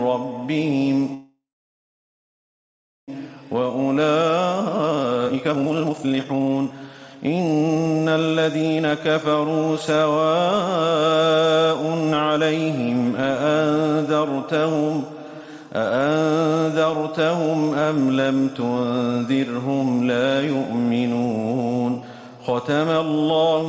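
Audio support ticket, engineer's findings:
Call audio freeze, 1.14 to 3.10 s: last sound smeared into a fading buzz, then about 1.65 s flat silence; waveform gap, likely jitter buffer underrun from held packets, nothing lost.

Jitter buffer speed-up, 3.22 to 8.93 s: audio hurried to about 134% at unchanged pitch; about two seconds of pitch periods trimmed; spectrogram shows compressed timing, harmonics unchanged, empty above 8 kHz.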